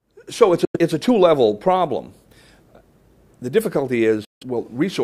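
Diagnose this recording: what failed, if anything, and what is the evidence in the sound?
The sound cuts to silence twice, from 0.65 to 0.77 s and again from 4.25 to 4.43 s, and each time it picks up further along rather than where it stopped, as if it had carried on playing underneath. That pattern points to the wireless playback link, most likely a Bluetooth dropout: packets reached the headphones too late to use and were discarded, costing roughly 90 ms and 160 ms of audio.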